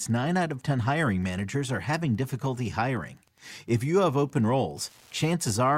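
Speech runs through the whole clip over a faint, steady ticking. It is Wi-Fi interference. A nearby Wi-Fi radio sends a beacon every 102.4 ms. Part of the audio circuit rectifies each burst. The result is a small tick just under ten times a second. It sits roughly 40 dB below the speech. It never stops, so it is clearest in the gaps between phrases.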